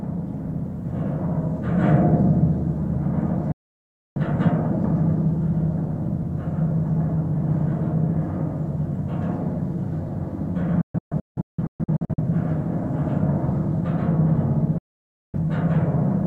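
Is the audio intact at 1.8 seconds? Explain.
Yes, the audio is intact at 1.8 seconds, with no fault or disruption to be heard at that moment.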